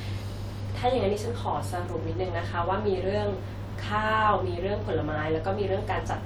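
No technical faults can be heard anywhere in the speech.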